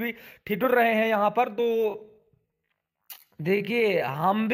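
At 1.54 s the sound abruptly slows to about 0.57 times its pace and stays that way to the end, pitch unchanged: a time-stretched section, likely from software repeating short pieces to lengthen the audio. It drags. On a spectrogram, frequencies hold steady while events widen horizontally.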